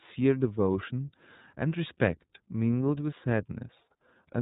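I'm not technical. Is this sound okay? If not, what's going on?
No. The recording went through the iLBC codec, a phone-call compressor that chops the audio into short chunks, which fits 30 ms frames, and rebuilds each one separately from a rough sketch. Everything above about 3.8 kHz is thrown away, so from start to finish the speech sounds dull and boxed-in, like an old phone line. The rebuilt chunks also give it a plainly audible rough, slightly robotic edge throughout.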